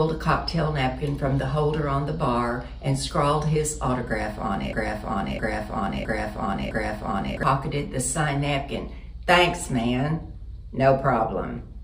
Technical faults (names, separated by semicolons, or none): broken-record loop